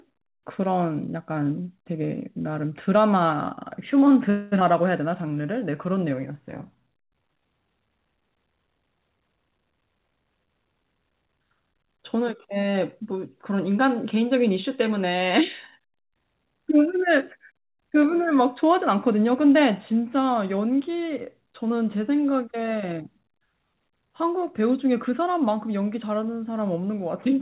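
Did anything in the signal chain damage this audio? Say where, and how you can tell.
Yes, the damage comes from the network and jitter-buffer stage of a call path, heard through narrowband speech with nothing above 4 kHz, which fits G.711 A-law at 64 kbps.

From 4.30 to 4.54 s the last sound is drawn out into a fading buzz for about 216 ms, then speech resumes exactly where it stopped with nothing lost. This is a call audio freeze, likely caused by packets stalling until the jitter buffer ran dry.

Just after, at 4.60 to 4.62 s, the speech jumps forward with almost no gap, and roughly 0.2 s of material is gone. This skip ahead shows a stretch of audio dropped while later audio was already waiting, cutting the added delay by roughly 150 ms.

Two stretches drag at unchanged pitch: 5.09 to 6.33 s at 92% speed (105 ms added) and 6.75 to 7.42 s at 88% (86 ms added). This jitter buffer slow-down repeats single pitch periods to rebuild the buffer's reserve.

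From 9.77 to 11.54 s the speech sounds hurried at 113% speed with the pitch held steady, about 0.2 s removed in total. This jitter buffer speed-up trims short pitch-period slices to draw down an overfull buffer and reduce latency.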